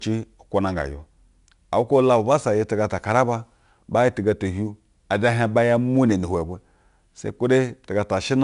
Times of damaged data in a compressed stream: none

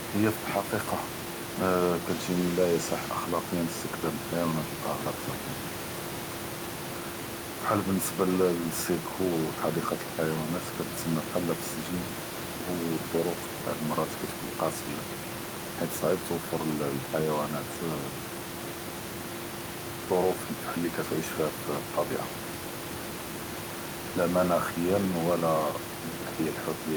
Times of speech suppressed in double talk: none

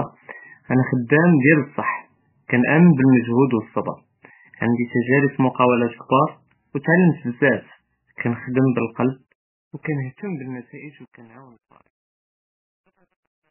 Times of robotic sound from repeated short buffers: none

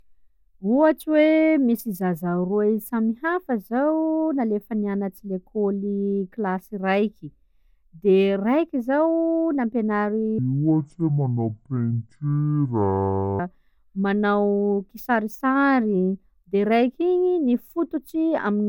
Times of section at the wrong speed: 10.38-13.39

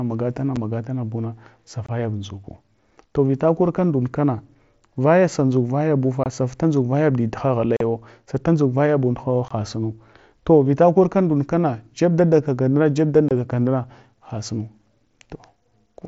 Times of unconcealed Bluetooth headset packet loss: 0.56, 1.86-1.89, 6.24-6.26, 7.77-7.81, 9.48-9.51, 13.29-13.31

